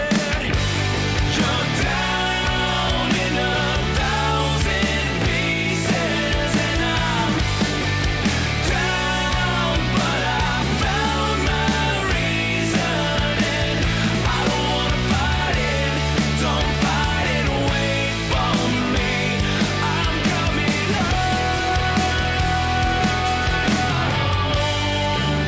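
No technical faults can be heard anywhere in this clip.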